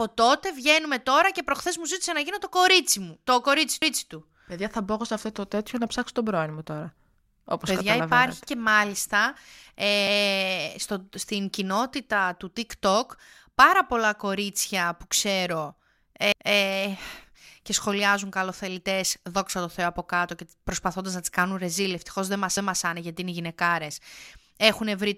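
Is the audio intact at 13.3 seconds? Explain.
Yes, at 13.3 seconds the speech plays through intact, with no fault in the audio at that moment.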